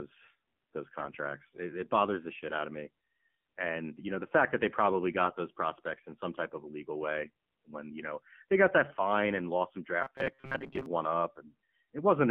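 The whole clip carries AMR narrowband mobile codec sound. The speech sits in a phone-line band of roughly 150 Hz to 3.4 kHz, and nothing above that survives. The buzzy, synthetic texture fits a low AMR-NB mode around 7.4 kbps.

From 5.22 to 5.38 s, and briefly again from 8.90 to 8.96 s, you get AMR bit errors. Flipped bits in the less protected parts of the frames throw the excitation pulses and fine parameters off. Pitch and level roughly hold, but the sound turns hoarse and gargly.

Between 10.02 and 10.86 s there's a rigid metallic buzz at about 134 Hz that still loosely tracks the speech. That's robotic sound from repeated short buffers, likely from the playback side looping its last chunk of about 7.5 ms. Roughly half the real audio gets skipped.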